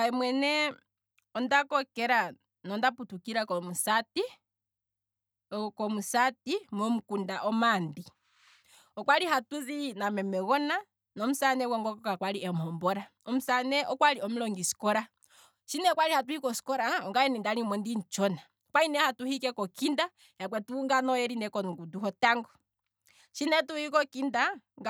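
No technical faults are audible anywhere in this speech recording.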